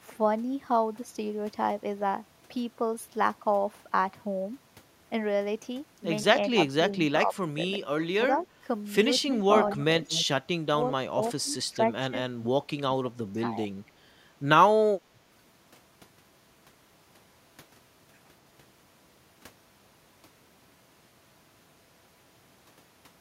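Speech clip with both call-path faults. Speech suppressed in double talk appears at 6.36–7.59 s, 8.18–8.65 s, 9.23–9.28 s, 10.74–10.79 s and 11.13–13.71 s: the voice dips by roughly 15 dB at first, then by up to around 25 dB in the last stretch. This is likely an echo canceller turning the talker down along with the far-end echo. An echo leak occurs at 9.2–9.37 s and 9.68–10.26 s, with a copy of the voice returning 232 ms late, about 10 to 15 dB below the speech. The likely cause is loudspeaker pickup that the canceller failed to remove.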